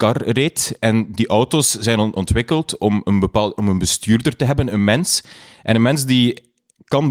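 Small, unevenly spaced hiccups run through the whole speech clip, with a faintly unsteady pace. This is clock drift between sender and receiver: the sending clock runs roughly 4 percent fast, so the receiver's jitter buffer keeps filling faster than it empties.

From 0.21 s to 6.98 s the repeated timing corrections cut out short slivers of audio, all in the same direction. The receiver is trimming these pieces to keep pace with a sender running at 104 percent speed.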